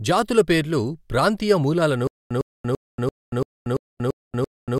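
From 2.07 s to the end, a stutter with silent gaps: a 105 ms fragment repeats 8 times, each followed by about 234 ms of digital silence, every 339 ms. Unlike a seamless loop, dead gaps separate repeats, likely a stalled stream replaying its last buffer.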